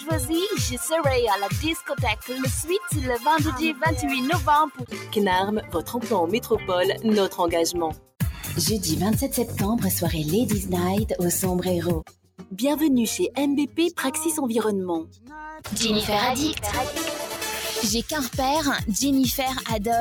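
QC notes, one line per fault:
Throughout: noise suppressor applied to music or sounds. A speech-tuned suppressor stays engaged and treats sustained, steady content as noise, so the level swings by about 5 dB as it reacts. Attacks pass while held portions and tails sag, giving a pumping, thinned character.
4.69–5.13 s, 5.62–5.92 s, 7.93–8.13 s, 12.03–12.58 s, 15.05–15.32 s: sound cut by the noise suppressor. Here the suppressor misreads the sound as noise and pulls it down harder, by about 9 to 12 dB at the deepest, for a few hundred milliseconds each. Sustained or decaying parts sink in level or lose their tails.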